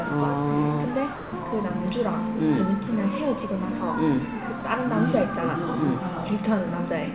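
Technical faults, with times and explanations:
1.16–1.32 s and 4.6 s, sound dropped by the voice detector: the sender's voice detector likely mistook the sound for background and stopped transmitting, so the receiver inserted comfort noise. The sound gives way to steady noise or near silence for 160 ms, then for 20 ms.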